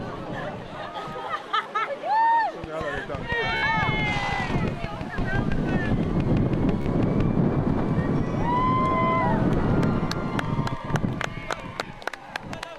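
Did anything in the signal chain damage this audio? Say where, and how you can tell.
Yes. Bluetooth stutter hits the wireless link at 1.63 s, 3.57 s and 6.82 s. Each time a short slice repeats as a brief buzz. The gaps last 29, 58 and 43.5 ms, which fits two, four and three lost packets. The receiver replayed its last buffer.

A train of clicks runs from 2.64 to 7.22 s. About thirty similar pulses tick at a steady 5.9 per second. They peak roughly 10 dB above the sound. They point to the analogue wiring, with likely interference from nearby equipment.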